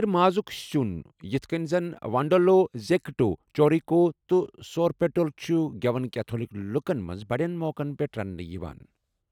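Nothing in this speech recording stands out as a technical fault, so there's no problem to point to at any moment.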